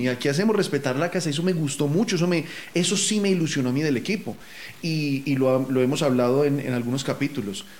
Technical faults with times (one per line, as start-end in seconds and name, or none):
0.00-7.80 low bit depth without dither